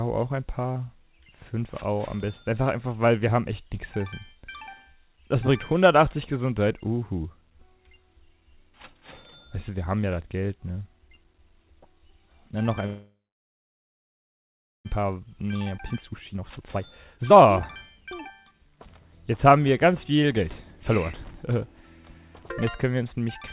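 At 12.86 s the audio stops and a brief fading remnant of the last sound gives way to about 1.7 s of silence until 14.87 s. It then resumes where it left off, with nothing lost. This is a call audio freeze, likely caused by packets held up in transit until the jitter buffer ran empty. On a waveform it shows as a flat stretch of about 1.7 s, and on a spectrogram as a smeared tail followed by a blank band. From 14.96 to 17.57 s the receiver works off the delay this built up, producing a jitter buffer speed-up. It repeatedly cuts out pitch-period-sized slices, so the audio runs at about 135% speed with the pitch unchanged and roughly a second is removed. A second, milder speed-up from 18.01 to 19.74 s runs at about 106% and takes out around a tenth of a second. On a spectrogram both show as compressed timing with harmonic spacing unchanged. Within the first speed-up there is a skip ahead at 15.77 to 15.80 s, where roughly a second of audio is dropped and the two sides are joined by only a 9 ms fill. 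It appears as an abrupt seam in the waveform and a sudden discontinuity in the spectrogram. The spectrogram also shows nothing above 4 kHz, which fits a narrowband 64 kbps call codec such as G.711 mu-law.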